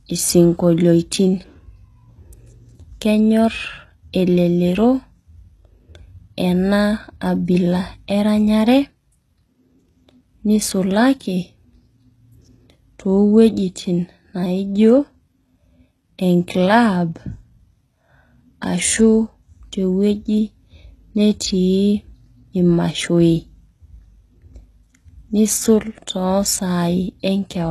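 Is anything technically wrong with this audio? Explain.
Yes. Throughout the speech there is plainly audible damage of the kind HE-AAC compression leaves, likely from a low rate around 16 kbps. The treble is rebuilt from copied lower bands, so s sounds turn gritty and lispy, and nothing reaches above about 12.3 kHz. Unlike a plain low-pass, the top stays bright but wrong.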